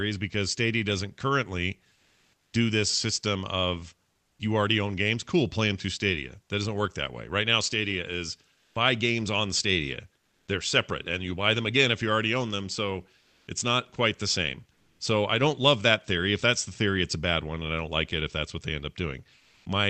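Between 1.93 and 4.39 s the speech is chopped by the voice detector: the sender's detection flips between sending and muting more than once, and about 880 ms in total is replaced by fill, likely from Opus discontinuous transmission. Syllable edges and quiet stretches drop out, leaving two or more holes. On a waveform these show as gaps cut into the speech envelope. On a spectrogram, the harmonic bands break off and smooth, even noise sits in their place.

From 8.55 to 10.47 s, comfort noise replaces the background for about 480 ms. Inside that stretch, at 8.68 to 8.75 s, the onset is clipped by the voice detector. The first 70 ms of the returning sound were likely never sent, so it starts abruptly, without its soft attack. On the waveform the envelope jumps straight from the noise floor into the speech. The spectrogram shows harmonics appearing with a hard vertical left edge rather than fading in.

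Comfort noise in place of the background comes back at 13.19 to 14.99 s, covering about 540 ms, and again at 19.37 to 19.65 s, covering about 280 ms. Across all three stretches the sender likely stopped transmitting in pauses, and the receiver filled them with synthetic noise shaped like the room. In the last stretch the background sits about 37 dB below the loudest speech, and the substitute is about 2 dB quieter than the real background. On a spectrogram these patches look uniform and textureless, with edges that seam against the real background. The call path's Opus coding, with content stopping near 8 kHz, runs through all of it.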